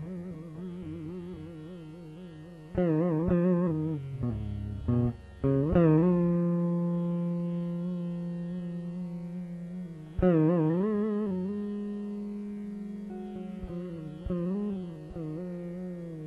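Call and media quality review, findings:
Corrupt frame decoded, 3.27 to 3.31 s. Decoder accepted a compressed frame with flipped bits and played it. Misread codes and gain values placed energy at wrong frequencies. Symptom: a short glitch, roughly 34 ms, peaking around -25 dBFS. The duration suggests a couple of consecutive damaged frames. Probable component: transport or bitstream integrity upstream of the decoder, with no error concealment triggered.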